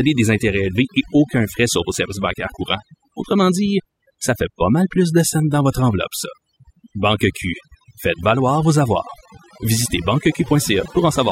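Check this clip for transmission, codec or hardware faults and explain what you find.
The speech carries one processing fault, present from start to finish: overdone noise removal. A denoiser set far too aggressively is cutting individual frequency bins whenever they sit close to its noise estimate, so the quieter parts of the speech vanish along with the noise. The gaps fall to near silence sprinkled with twinkling, chirpy specks. On a spectrogram the background shows as scattered isolated dots on a dark field, with speech harmonics breaking into patchy, holed fragments.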